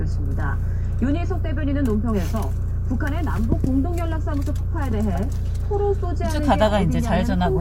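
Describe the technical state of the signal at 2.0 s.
At 2.0 s the audio is intact, with no dropout, clipping, glitch or other fault audible at that point.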